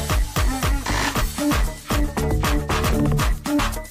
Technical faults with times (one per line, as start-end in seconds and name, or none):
1.16-1.22 compressed frames skipped
2.88-2.93 compressed frames skipped